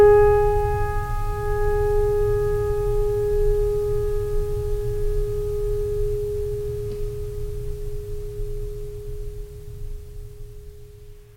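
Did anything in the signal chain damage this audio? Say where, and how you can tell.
No, nothing in the signal chain audibly damaged this music. No stage, from wiring through conversion and processing to storage and playback, leaves a mark that can be heard anywhere in the recording.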